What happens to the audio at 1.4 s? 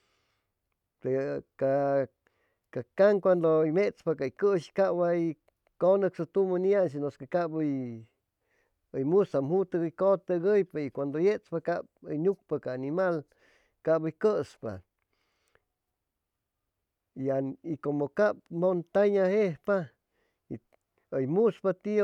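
Nothing goes wrong at 1.4 s; the speech runs on cleanly through that moment with no dropout, click or distortion.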